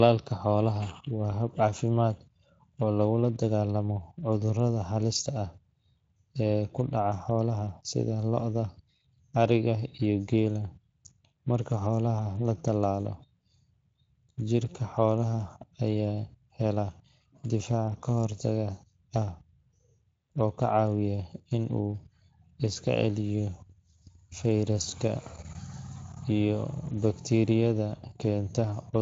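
From start to finish the speech carries plainly audible Speex codec damage. It was encoded at 20.6 kbps. There's too little detail for the excitation, so voices come out hoarse and noisy, and any top end above 8 kHz is just shaped noise.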